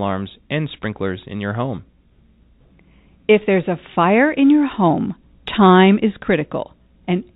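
The audio arrives intact over its call path, narrowband with nothing above 4 kHz, and it carries the usual coding noise that fits a 64 kbps G.711 mu-law codec.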